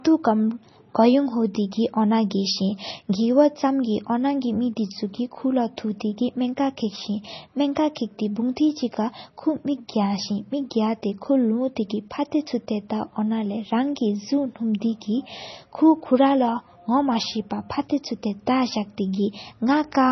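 Throughout the speech, the audio has most likely passed through heavy MP3 compression, at a bitrate low enough to fit roughly 24 kbps. Starved of bits, the encoder has cut everything above 6 kHz and dropped weaker frequency lines that flicker in and out between frames. The result is dull, band-limited speech with a watery, swirling texture, metallic chirps on s sounds, and consonant onsets smeared rather than crisp.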